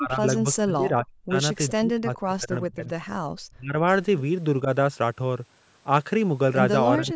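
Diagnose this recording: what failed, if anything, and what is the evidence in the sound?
Speech dips or vanishes at 0 to 1.35, 1.77 to 2.88, 3.5 to 3.85, 4.64 to 4.69 and 6.98 to 7.15 s, by up to about 40 dB. This is likely speech suppressed in double talk: in the call processing stage, the echo canceller mistook overlapping talk for echo and turned the near talker down.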